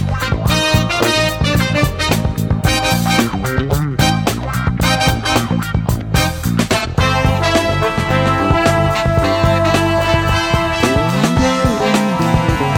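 At 6.79 to 6.86 s there is a brief smeared, noisy patch where the sound loses its detail for a moment. This is AAC frame loss with concealment: about 43 ms of data went missing, which fits a single lost frame, and the decoder covered the gap by reusing the previous spectrum.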